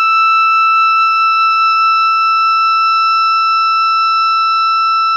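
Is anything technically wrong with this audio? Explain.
No, nothing technically wrong can be heard anywhere in this music clip.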